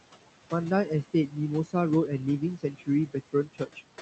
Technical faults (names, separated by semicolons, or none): noise suppressor artifacts; speech cut by the noise suppressor